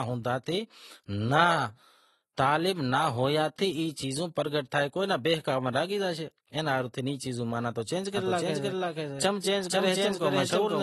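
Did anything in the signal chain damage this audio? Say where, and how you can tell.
Yes. The codec stage damaged this speech throughout. Nothing is present above 12.1 kHz, and codec damage is plainly audible across the clip. That is likely AAC compression, AAC-LC at a low bitrate, which fits roughly 32 kbps. Short of bits, the encoder cut the top band and coarsened what remained.

A doubled audio track appears at 8.17 s and runs to the end. A second full-band copy follows about half a second behind, at roughly equal level. It starts abruptly and has no decay or room colour. A slower second capture path or an edit holding two offset copies is the likely cause.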